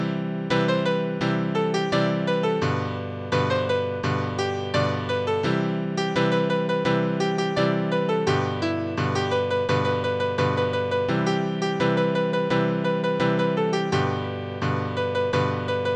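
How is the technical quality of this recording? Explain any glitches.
No technical faults are audible.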